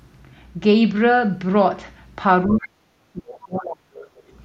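The other side's voice leaking through appears in this speech clip from 2.47 to 2.69 s and again from 3.99 to 4.23 s: a faint second voice, roughly 20 dB and then 25 dB below the talker. The likely cause is a loudspeaker on the talker's device playing the far end back into the microphone, with the echo canceller leaving a residue it failed to subtract. Speech suppressed in double talk overlaps these moments, from 2.51 to 2.8 s and from 3.1 to 4.04 s. The talker's level sinks sharply, at its deepest by some 35 dB, for about a fifth of a second in the first stretch and about a full second in the second. This is likely the echo canceller hearing both sides at once, failing to tell the talker from the echo, and clamping down on everything.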